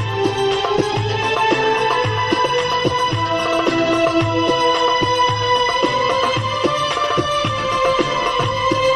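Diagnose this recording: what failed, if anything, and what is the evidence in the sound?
Compressed frames were skipped at the codec decode stage, at 0.72–0.82 s and 8.25–8.43 s. Each time the sound jumps forward by about a tenth of a second. A buffer dropout would leave a gap or a hard click instead.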